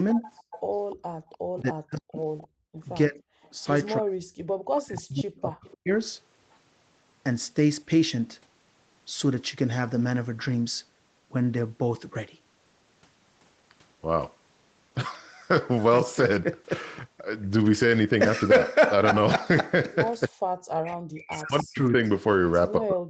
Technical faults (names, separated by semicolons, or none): speech suppressed in double talk; echo leak; background gated by the echo canceller